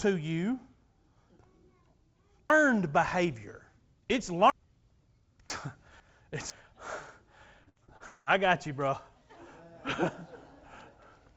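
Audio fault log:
2.5–4.5 s and 5.5–6.5 s, chunks out of order. The sound jumps and doubles back. A half-second chunk plays too late. In the first run it lands three chunks after its proper place. In the second it is one chunk late. No audio is missing, but the sequence is scrambled. Each run has three hard joins around a jumbled passage.
7.64–8.03 s, repeated packet loss (robotic sound). This comes just before "I got you bro." The sound turns choppy. Four short holes open in quick succession, the longest about 61 ms. Each is patched by stretching the last sound. Concealment covers roughly two-fifths of the stretch, so the result is choppy with pieces missing. The patches stay within the 8 kHz band of the G.722 call codec.
8.06–8.29 s, long network dropout. This also comes right before "I got you bro." The sound becomes a smeared, buzzy continuation lasting about 0.2 s. The cause is likely a network gap in which nothing arrived, with the receiver carrying the last sound forward. 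The fill lasts the whole gap, so no true silence is heard. The audio then resumes with that stretch lost.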